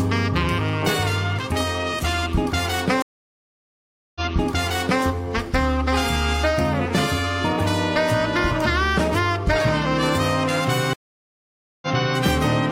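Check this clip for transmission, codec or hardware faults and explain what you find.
Two stream reconnects, at 3.02 to 5.04 s and 10.93 to 12.19 s. Each time the connection dropped, playback went silent (about 1.13 s, then 0.89 s), and a fresh decoder resumed from a server burst, repeating material 0.88 s and 0.37 s earlier. The waveform shows flat gaps, and the spectrogram shows repeated patterns just after each gap.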